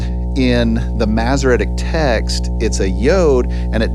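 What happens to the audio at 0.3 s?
At 0.3 s the speech sits on top of mains hum, a steady 60 Hz tone that runs unbroken through the whole clip, not just this moment. The hum comes from the power line coupling into the signal path, most plausibly through a ground loop or a nearby transformer. It is roughly as loud as the speech itself, so the low drone and its low harmonics stay clearly audible under the speech and in every gap.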